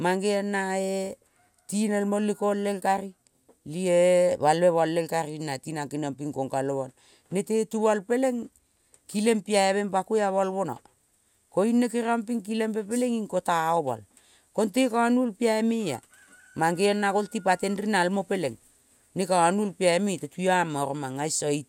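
Speech, with nothing technically wrong to point to at any time.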